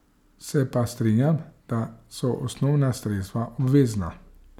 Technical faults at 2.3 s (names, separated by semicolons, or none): none